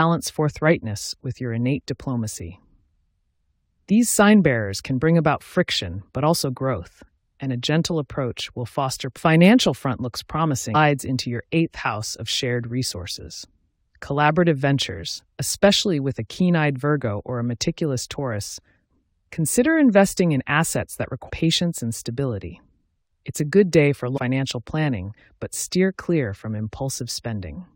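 Damaged data in a compressed stream appears four times. At each point, part of the encoded speech arrives corrupted, so the decoder misreads those frames, loses sync and hunts for the next valid frame header. Each event is heard as a brief chirp or blip cutting into the speech: from 9.16 to 9.18 s, at 10.74 s, from 21.28 to 21.30 s, and from 24.16 to 24.19 s. Each lasts only about 20 ms before normal decoding resumes.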